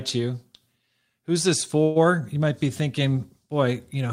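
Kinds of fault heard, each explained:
Call audio freeze: from 1.83 to 1.98 s the speech stops advancing and the last sound is stretched into a fading buzz lasting about 120 ms, with no drop to silence. When the sound resumes it picks up exactly where it halted, so nothing is skipped and everything after arrives about 120 ms later. This is likely a late-packet stall that emptied the jitter buffer. Unlike a dropout, which cuts material out, this one inserts a pause.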